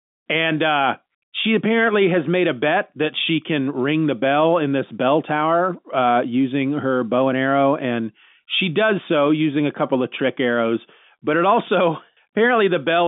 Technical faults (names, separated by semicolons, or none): none